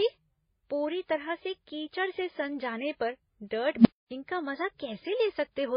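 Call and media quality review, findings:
Transcoding between lossy codecs, whole clip: dull, band-limited speech with nothing above 5.2 kHz, swirly smearing and a second layer of coarse, metallic artefacts stacked on top. The combination likely comes from a chain of codecs: a very low-rate MP3-style first encode, then HE-AAC, then WMA 1. Each re-encode spends bits on the earlier damage and adds its own, while the lowest cut-off in the chain persists.

Unstable filter, 3.76–4.11 s, after "सन जाने पर डर्ट" and before "का मजा": a low tone around 200 Hz swells over about 92 ms into a loud, clipped drone, then audio drops out for about 257 ms. A recursive filter stage, probably in the processing path, diverged from bad coefficients. Its output grew without bound, clipped, then overflowed to silence until the filter reset.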